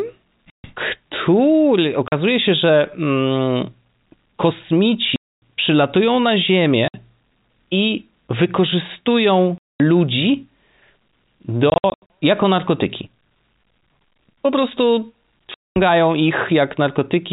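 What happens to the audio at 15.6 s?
Packet loss filled with silence cuts the sound from 15.54 to 15.76 s: a 220 ms gap of dead silence, fitting lost 20 ms packets, with hard edges instead of concealment's smeared repeats.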